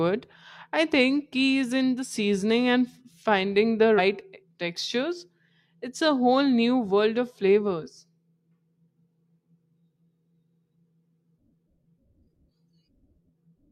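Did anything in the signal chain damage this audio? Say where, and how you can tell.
Yes. The decoder skipped compressed frames at 3.95 to 3.99 s, after "seasoning and finding the". The speech jumps about two 42.7 ms frames ahead.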